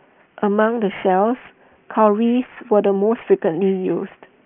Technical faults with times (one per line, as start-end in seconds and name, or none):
0.00-4.45 aliasing